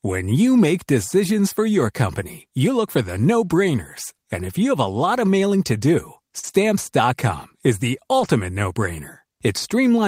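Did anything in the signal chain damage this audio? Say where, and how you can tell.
Yes. The damage happened on the network, as lost packets rebuilt from error correction. There are four events: 0.57 to 0.59 s, 2.21 to 2.23 s, 6.43 to 6.49 s, and 8.19 to 8.29 s. The speech never drops out. Each spot turns briefly rough and grainy instead. Opus carries a low-bitrate copy of each frame inside the next packet. The decoder played those copies, so the lost frames return at lower quality. The lengths suggest one, one, two and three packets.

Around 6.4 to 6.6 s there is also short concealed packet loss. The first part runs from 6.39 to 6.45 s, with about 40 ms missing. The second runs from 6.51 to 6.55 s, with about 20 ms missing. No backup copy arrived for these. The receiver extended the last bit of speech, following its pitch or shaped noise, then crossfaded back. That is heard as a brief smear or wobble.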